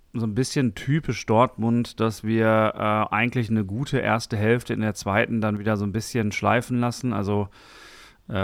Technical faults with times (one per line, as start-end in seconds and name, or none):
5.57-5.67 sudden gain jump